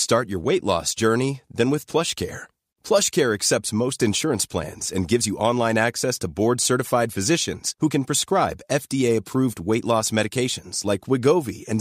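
Nothing in the recording stood out as a technical problem on listening.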